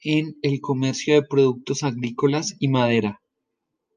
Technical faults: none

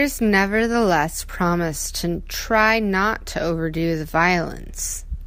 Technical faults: none

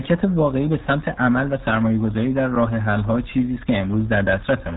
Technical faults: RealAudio 14.4 codec

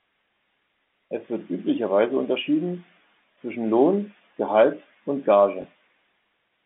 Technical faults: packet loss with last packet repeated

